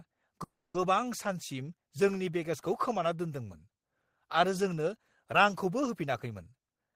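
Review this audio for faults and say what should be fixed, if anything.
Between 0.43 and 0.77 s the speech stops and is replaced by a brief continuation of the preceding sound that dies away into about 250 ms of silence, after which the speech resumes where it left off. This is a call audio freeze: the likely cause is packets stalling in transit until the jitter buffer ran dry, with the receiver filling 310 ms. Nothing is lost, but playback now runs 310 ms later than before. Prevent it by improving network path stability or increasing jitter buffer depth so short delivery stalls are absorbed.

From 6.67 to 6.94 s the speech plays back hurried, at roughly 161% of normal rate with pitch unchanged. This is a jitter buffer speed-up. The buffer held more audio than its target, so the receiver cut repeated pitch-period-sized pieces, about 150 ms in total, to bring latency back down. The result is compressed timing at the end of the clip. 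Prevent it by limiting the catch-up rate so excess buffer is drained gradually and inaudibly.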